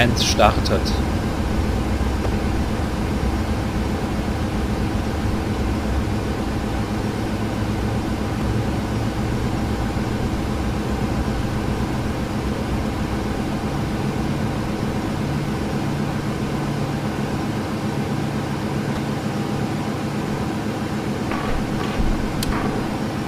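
Damaged data in the compressed stream makes the decoder misread frames, lose sync and hunt for the next valid frame header. Each time, the audio breaks into a brief glitch of about 34 ms, at 2.22–2.26 s, 8.39–8.42 s and 18.94–18.97 s.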